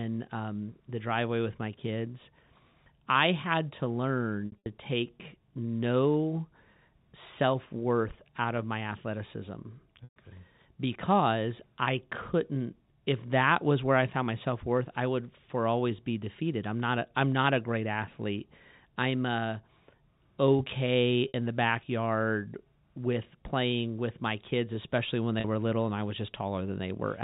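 Speech over a G.711 telephone channel, band-limited at 4 kHz, with dropouts at 4.46–4.66 s, 10.04–10.16 s, 21.28–21.34 s and 25.40–25.44 s. In each, the sound briefly holds on a buzzy repeated tone. In the longer gaps, 120 ms and a scattered 140 ms, it fades to silence before cross-fading back. This is packet loss with pitch repetition, where the receiver loops the last pitch period to cover lost packets, consistent with 20 ms packets.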